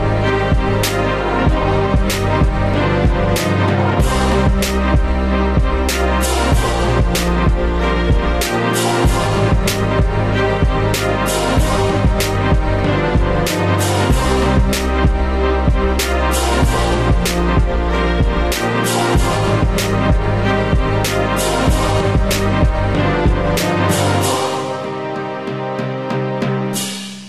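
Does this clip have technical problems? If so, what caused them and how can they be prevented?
Yes. Damaged data in the compressed stream causes a brief glitch from 20.62 to 20.64 s. Corrupted bytes at that point made the decoder misread its frames and lose sync until it found the next valid frame header, so a short chirp, click or hole cuts into the sound. To prevent it, transfer and store the file with checksums or error-checked delivery, and keep metadata out of the audio payload.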